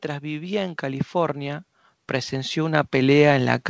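Automatic gain rising affects this speech recording from 0.19 s to the end at about 3.7 s: the gain control judged the input too quiet and kept raising its gain slowly. Because the stage amplifies everything, the voice and the background noise swell together over several seconds. The audio passed through a call path, and the absence of content above 8 kHz fits a wideband codec such as G.722.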